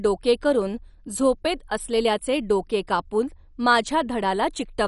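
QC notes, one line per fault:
Throughout: MP2 compression. The speech is dull, with no content above 11.3 kHz, and carries a plainly audible gurgling, granular distortion. This is likely MPEG Layer II coding starved of bits. The encoder divides the spectrum into 32 equal sub-bands, switches off the upper ones entirely, and quantises the remaining bands coarsely, so the retained bands flicker and churn. The degree of damage points to a low bitrate, consistent with roughly 48 kbps.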